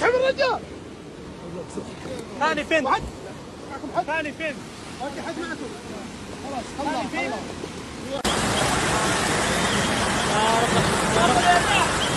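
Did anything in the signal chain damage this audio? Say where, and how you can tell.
Yes: compressed frames skipped at the codec or storage stage, at 1.84–1.88, 2.86–2.90, 3.69–3.73 and 6.02–6.05 s. The audio jumps ahead, by roughly 0.4 s to about a second, rather than falling into a dropout's silence.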